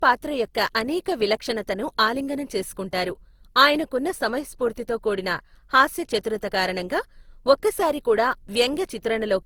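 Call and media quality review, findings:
Generation loss, throughout the speech. Swirly, hollow texture with smeared consonant attacks, worse than a single encode at this rate would give. Likely cause: repeated lossy transcoding, consistent with Opus at around 48 kbit/s applied roughly four times. Each pass requantises on a shifted frame grid, so noise accumulates. Spectrogram: content cut off above 20.2 kHz. Waveform: onsets softened, transients rounded.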